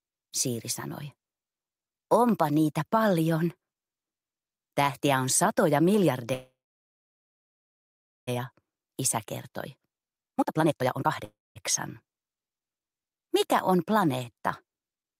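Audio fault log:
6.33–8.29 s, call audio freeze: The sound stops and the gap is filled for about 1.94 s. A brief fading continuation of the last sound decays into about 1.73 s of silence. It then resumes exactly where it stopped, with nothing skipped. That sets it apart from packet loss, which cuts material out. Here the flow was held up, likely because delayed packets emptied the jitter buffer, and everything after sits about 1.94 s later.
8.39–11.24 s, jitter buffer speed-up: The sound runs at about 136% of normal speed and feels hurried, but its pitch stays put. A tape or resampling speed change would raise the pitch as well. Once the delayed packets arrived together, the buffer held far more than its target. The receiver trimmed many short pitch-period slices in succession and removed roughly a second in total to win back part of the added delay.
11.24–11.58 s, call audio freeze: A shorter stall of about 0.31 s comes straight after the catch-up. 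It is mostly silent, about 0.22 s, after a brief fading fill. Again nothing is missing and the sound picks up where it left off, so it is an inserted gap rather than a cut. The likely cause is again an empty jitter buffer, which adds about 0.31 s of delay.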